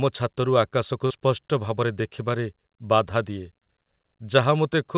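At 1.06 to 1.12 s, and again at 3.64 s, there's short concealed packet loss: about 40 ms, then 20 ms, of audio arrived too late, so the receiver stretched the preceding sound to fill the gap. Each one comes across as a quick smear or wobble in the narrowband call sound, which stops at 4 kHz and fits G.711 mu-law.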